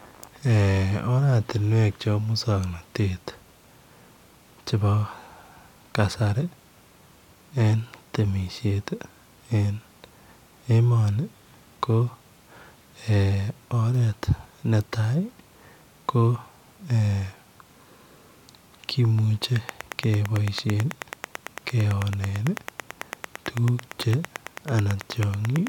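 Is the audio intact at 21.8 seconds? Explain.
No. A train of clicks runs from 19.69 to 25.68 s, likely interference injecting a pulse about 9 times per second at regular spacing. It ticks over the speech and pauses, peaking around 10 dB above it, showing as evenly spaced waveform spikes and thin vertical spectrogram lines.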